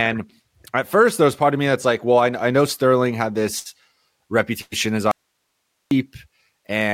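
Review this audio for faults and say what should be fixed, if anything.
Two bursts of packet loss occur, at 3.59 to 3.67 s and 4.61 to 4.74 s. In each, the receiver continues the last sound and fades it out, then skips ahead: about 60 ms and then 100 ms of speech are missing, and the second burst includes a 10 ms silence. A larger jitter buffer and forward error correction on the network link would prevent this.

An audio dropout to a faint residue runs from 5.11 to 5.91 s. The speech cuts off abruptly for about 0.8 s, leaving only hiss roughly 55 dB below the signal, then returns just as suddenly. The likely cause is the source signal being interrupted while the downstream path stayed live. Securing the source connection and monitoring input level would prevent it.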